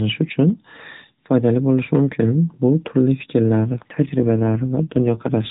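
From 3.58 s to the end, an AMR rate drop makes the narrowband speech rougher and buzzier, consistent with 12.2 falling to 5.9 kbps; unlike a dropout, there's no gap and the bandwidth is unchanged.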